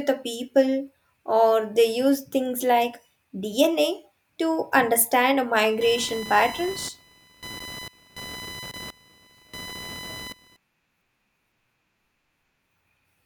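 From 5.56 s to 10.57 s, computer activity noise sits under the speech: a buzzing chirp pulsing at around 1 kHz, roughly 15 dB below the speech. Shifting processor or graphics load moves the shared audio ground, injecting interference that follows the machine, not the speech.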